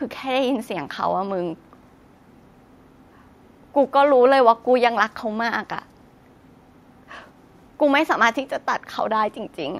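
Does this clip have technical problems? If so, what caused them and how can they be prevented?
No, this clip has no technical problems, so there is no cause to explain and nothing to prevent.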